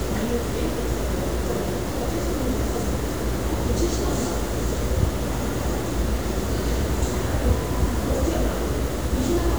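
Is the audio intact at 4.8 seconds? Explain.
No. Low bit depth without dither spans the whole clip, likely 5-bit truncation, so the sound is gritty with distortion about 20 dB down. Waveform stairsteps and spectrogram haze follow the signal.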